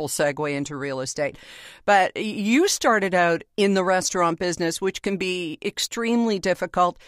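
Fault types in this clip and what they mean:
No faults detected.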